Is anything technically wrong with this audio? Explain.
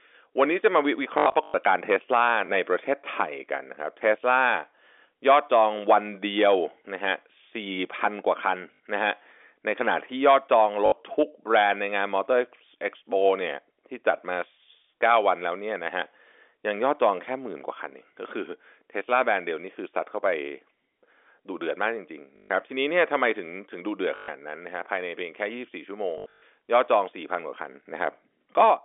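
Yes. The speech has packet loss with the last packet repeated at 1.18 to 1.54 s, 8.74 to 8.80 s, 10.86 to 10.92 s, 22.36 to 22.50 s, 24.16 to 24.28 s and 26.18 to 26.42 s. When packets failed to arrive, the receiver replayed the previous one until fresh audio resumed. The spacing fits 20 ms packets. The copies don't join in step with the pitch, and the longer runs, up to about 100 to 120 ms in the first and last events, buzz at roughly 50 Hz as a brief robotic stutter. On a waveform, identical 20 ms blocks sit side by side with small breaks at each boundary. A spectrogram shows thin vertical click lines every 20 ms, with the harmonics frozen flat instead of moving. The G.711 telephone band, limited to roughly 300 Hz to 3.5 kHz, stays audible throughout.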